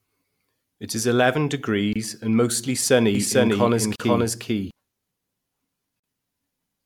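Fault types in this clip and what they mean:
Gap at a join of encoded pieces: at 1.93, 3.96 and 6.00 s, silences of 25 to 40 ms where separately encoded pieces were joined untrimmed.
Doubled audio track: from 3.15 to 4.71 s, an equally loud copy of the speech trails by roughly 0.4 s, likely from a second, slower capture path.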